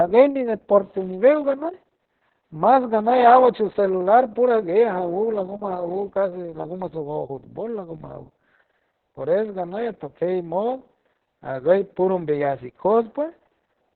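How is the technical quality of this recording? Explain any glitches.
Poor. Heavy Opus voice compression runs throughout. The coder cuts everything above 4.4 kHz and coarsely quantises the excitation, which points to a bitrate near 6 kbps. The speech sounds muffled, hoarse and faintly robotic.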